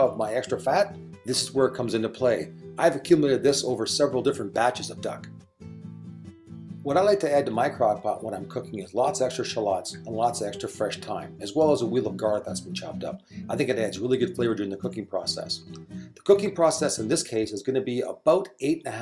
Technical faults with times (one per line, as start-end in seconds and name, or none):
none